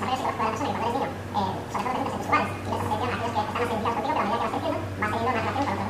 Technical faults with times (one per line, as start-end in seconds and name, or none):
0.00-5.89 wrong sample rate